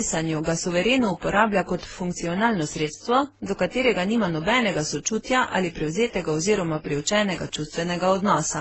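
A speech recording throughout which the highs stop dead at 8.1 kHz and the tone carries layered smearing, warble and swirly ringing that no single encoder would leave. This points to transcoding between lossy codecs, likely a low-rate AAC stream near 16 kbit/s re-encoded through Opus and finally MP3, each stage spending bits on the previous stage's damage. A spectrogram shows a flat ceiling at 8.1 kHz with blotchy, holed time-frequency patches beneath it.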